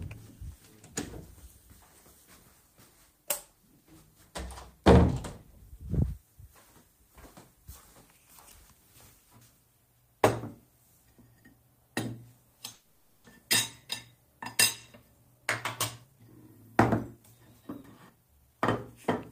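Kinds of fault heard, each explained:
Call audio freeze: At 12.73 s the sound stalls for about half a second, with the last bit of audio stretched out to fill the gap, and then it carries on right where it left off. Nothing is actually lost; the 510 ms is just inserted, so everything after runs that much later. The likely cause is packets getting held up in transit and the jitter buffer running dry until they showed up.
Jitter buffer speed-up: After that stall the buffer is holding more audio than it wants, so the receiver catches up by snipping out tiny pitch-period-sized chunks over and over. It does this twice: a sharp burst from 16.04 to 16.31 s playing at about 164% speed, then a gentler stretch from 17.17 to 18.61 s at about 116%. Each burst trims roughly 0.2 s. The pitch stays the same, but the sound comes across as rushed.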